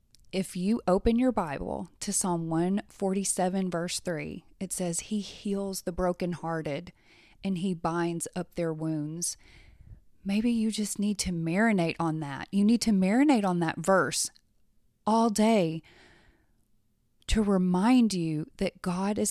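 No technical faults can be heard anywhere in this speech recording. There is no moment in the audio that needs a time mark or further comment.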